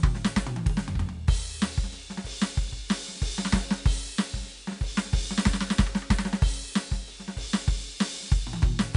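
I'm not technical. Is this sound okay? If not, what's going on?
No. Two problems run through this music.

The first is 4-bit ADPCM compression, an old, cheap way of storing audio that saves each moment as a rough step from a guess. It leaves a gritty hiss that rises and falls with the music, loudest on loud passages and roughest on sudden hits. Unlike ordinary background hiss, it disappears when the music is quiet. Nothing above about 10.6 kHz comes through, which suggests a low sample rate and makes the whole clip sound dull.

The second is clock slip clicks, from about 0.13 s to 8.94 s. These are tiny ticks that come about every 0.05 s, roughly twenty a second and around two hundred in all, so together they sound like a soft, even rattle. Each tick is a single sample being dropped or doubled. The likely cause is two devices running on slightly mismatched clocks, off by a few hundred parts per million. 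Random crackle comes at uneven moments, but these ticks keep a steady rhythm and are clearest on loud, held sounds.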